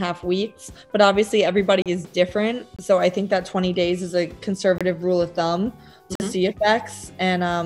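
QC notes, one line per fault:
1.82–1.86 s, block of digital silence: about 37 ms of silence, which likely comes from the output buffer going unfilled, so the audio cuts out and back with no fade.
2.76–2.79 s, block of digital silence: a 23 ms silent gap, which fits one missed 1024-sample buffer, heard as a short hole.
4.78–4.81 s, block of digital silence: the same 23 ms dropout, consistent with another missed 1024-sample buffer, giving a short hole.
6.15–6.20 s, block of digital silence: 46 ms of silence, which fits two consecutive missed 1024-sample buffers, long enough to be heard as a short hole.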